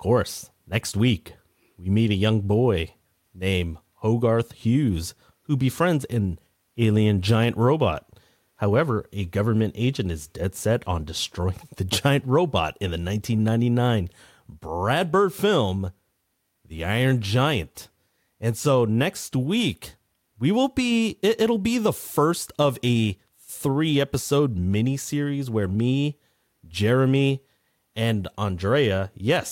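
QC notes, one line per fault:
No faults heard anywhere in the speech.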